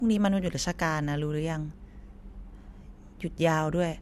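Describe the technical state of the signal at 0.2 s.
At 0.2 s, as throughout, the speech shows low-bitrate audio saved at a high bitrate: nothing above 13 kHz, likely from an earlier low-rate AAC pass that the later MP3 encode cannot restore.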